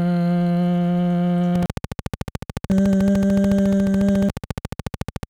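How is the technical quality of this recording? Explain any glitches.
The recording is marred by one sustained fault, a train of clicks running from 1.55 s to 5.24 s. About 50 near-identical pulses arrive at a steady 13.9 per second, each peaking a few decibels above the underlying sound. The regular spacing and identical shape point to a repeating external pulse, likely electrical interference from nearby equipment or a faulty connection or power supply. The result is an even mechanical ticking laid over the sound, which persists to near the end.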